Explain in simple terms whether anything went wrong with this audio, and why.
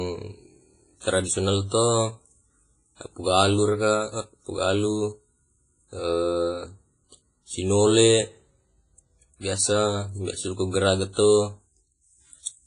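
The speech sounds washy and ringing from start to finish, with a hiss that swells and fades along with the talking, and the crisp top end is missing above 10.5 kHz. This is likely heavy WMA compression, which blurs and discards fine detail.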